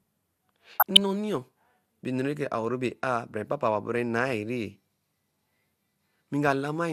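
DAB burbling runs from 0.73 to 1.0 s of the speech. Bit errors from weak reception, a rate of well under one percent, slip past error correction into the MP2 data, so corrupted samples put short blips of noise in individual sub-bands and corrupted scale factors make sub-bands jump in level for up to a frame, producing a burbling sound.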